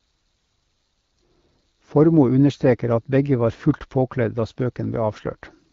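The speech clip has nothing technically wrong with it, carried over AMR wideband (HD Voice) at 12.65 kbit/s.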